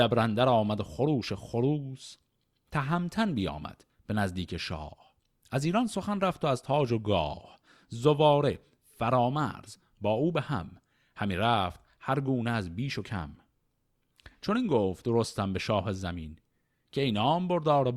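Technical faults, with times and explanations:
No technical faults are present in this clip.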